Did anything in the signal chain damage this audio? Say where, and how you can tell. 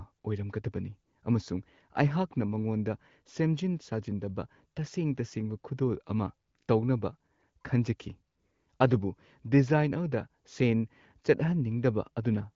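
No, nothing in the signal chain stood out as damaging this speech on listening.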